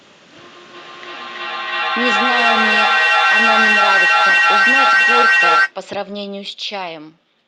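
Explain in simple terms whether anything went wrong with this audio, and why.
From 0.74 to 5.75 s there is feedback echo between two devices: speech returns about every third of a second, building louder instead of fading like ordinary echo.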